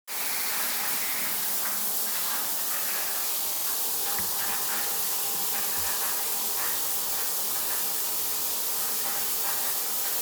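This everyday-sound recording stutters twice. From 0.34 to 0.48 s a 69.7 ms slice plays two extra times, and from 3.54 to 3.63 s a 46.4 ms slice does the same. These are repeated frames: a short run of compressed frames, pointing to about three and then two frames, was written or sent more than once, so the decoder replays it. The two repeats add about 139 ms and 93 ms to the running time.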